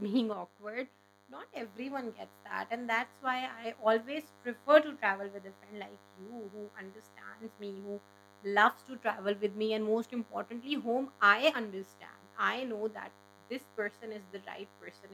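A DECT cordless phone buzz runs through the whole clip. A nearby DECT handset or base station sends a short radio burst every 10 ms. The audio circuit rectifies it, giving a thin, steady 100 Hz buzz with many harmonics. It sits roughly 30 dB below the speech.

At 0.33 s the speech and background noise drop together by about 5 dB, in a single step. They stay lower until 1.56 s, then jump back. This is likely a sudden gain jump: digital gain switched between samples with no ramp.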